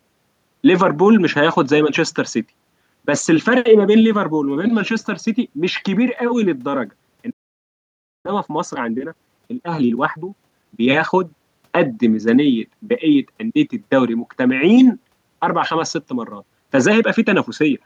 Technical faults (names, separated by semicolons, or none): playback stall; time-compressed catch-up